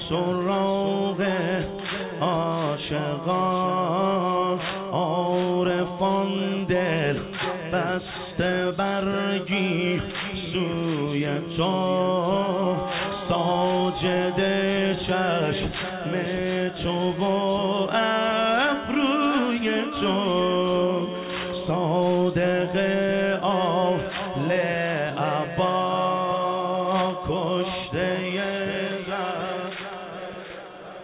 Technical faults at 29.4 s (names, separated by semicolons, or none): none